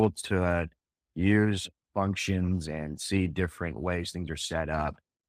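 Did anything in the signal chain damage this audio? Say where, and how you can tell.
No, no signal chain damage.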